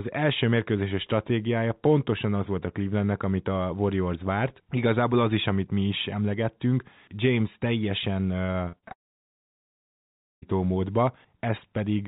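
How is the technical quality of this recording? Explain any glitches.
The recording has two clear network faults near the end, and the whole clip is band-limited, with nothing above 4 kHz, which fits a G.711 A-law call path at 64 kbps.

Repeated packet loss (robotic sound), 8.46 to 8.92 s: packets kept failing to arrive in time, and the receiver patched each hole by extending the last bit of audio. There are about five short gaps, the longest about 48 ms, and roughly a third of that stretch is filled-in guesswork. The speech turns choppy, with about 140 ms of real sound missing.

Long network dropout, 8.92 to 10.44 s: the audio cuts out for about 1.5 s. A brief smeared continuation of the last sound fades almost immediately, leaving roughly 1.46 s of silence before speech resumes, with nothing of the missing stretch recovered. The likely cause is a long network interruption in which no audio reached the receiver, so the concealment ran out and fell to silence.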